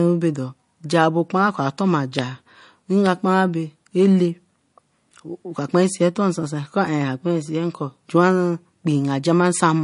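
Watery, swirling speech runs throughout, with nothing above 10.6 kHz, likely from MP3 compression at a low bitrate, fitting roughly 40 kbps.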